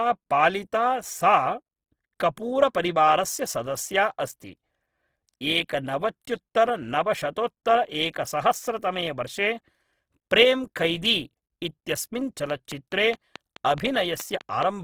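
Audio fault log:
Throughout, Opus compression: the speech has a grainy, rough texture, with tones partly replaced by noise. This likely comes from Opus in its music (CELT) mode at a low rate, perhaps around 16 kbps, still keeping full bandwidth. The encoder preserves each band's energy and refills starved bands with folded or noise content. On a spectrogram, the upper bands look smeared and speckled rather than holed, and the harmonic lines blur into noise.
12.5 to 14.64 s, train of clicks: a steady ticking of about ten near-identical pops, evenly spaced at about 4.7 per second. They sit over the speech and are audible in gaps too, peaking at roughly 10 dB above the signal. The regular repetition likely points to interference from nearby equipment or a faulty connection. On a waveform these are sharp, evenly spaced spikes. On a spectrogram they are thin vertical lines spanning all frequencies.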